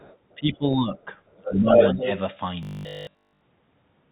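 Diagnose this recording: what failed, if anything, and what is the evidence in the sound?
A second talker comes through the microphone channel, which is a failure at the call-processing stage: the other side's voice leaking through. From 0.00 to 0.35 s it is faint, about 30 dB below the main speech. From 1.31 to 2.19 s it rises to about 5 dB above the main speech. The far end is being played on a loudspeaker and picked up again, and the echo canceller likely failed to subtract it from the microphone signal.

In the same call-processing stage, the near talker's speech is suppressed in double talk. Between 0.37 and 1.06 s the voice dips for roughly half a second in total, at worst by about 15 dB. From 1.36 to 1.75 s it drops hardest, about 25 dB, over roughly 0.4 s, while the leaked voice is loud. A brief dip of about 5 dB follows at 1.95–2.03 s. When both sides overlapped, the echo suppressor likely could not separate near-end speech from echo and attenuated everything.

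From 2.63 to 3.41 s the audio becomes a rigid, metallic buzz at 50 Hz, which is robotic sound from repeated short buffers. The sound loosely tracks the speech contour, but throughout this span it is made entirely of repeats. A 50 Hz repetition rate means a 20 ms segment is being looped, which fits a 20 ms frame. This is likely a jitter buffer or playout stage that starved of packets and concealed the gap by replaying the last frame instead of the real audio. The narrow band with nothing above 4 kHz is consistent with G.711 on the call path.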